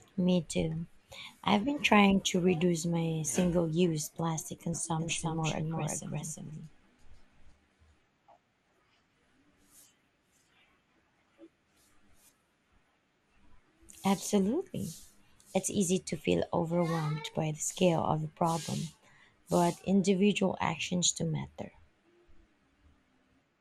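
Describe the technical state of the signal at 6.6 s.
At 6.6 s the speech is likely passing through a slow second capture path, so a doubled audio track from 5.00 to 7.52 s repeats everything around 0.4 s late, about 5 dB quieter, dry and full-band. Likely MP2 compression, with plainly audible damage consistent with roughly 80 kbps, also applies throughout: upper sub-bands drop out and coarse quantisation makes the sound dull and gurgly.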